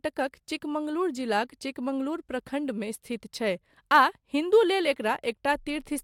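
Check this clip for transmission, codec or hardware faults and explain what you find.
One hardware fault runs through the whole speech clip: sample clock jitter. An unsteady converter clock, wandering by around two microseconds, mistimes samples, adding hiss roughly 40 dB down that swells on loud, bright sounds and disappears in pauses. A spectrogram shows a faint broadband haze tracking high-frequency energy.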